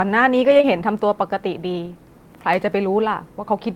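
Short concealed packet loss at 0.57 and 0.61 s: two back-to-back 20 ms gaps, each filled by extending the preceding sound, leaving a brief smear.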